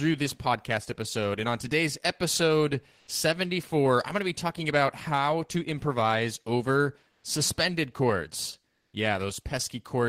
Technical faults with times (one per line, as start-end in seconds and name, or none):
2.99-3.07 comfort noise in place of the background
7.11-7.23 comfort noise in place of the background
8.75-8.91 comfort noise in place of the background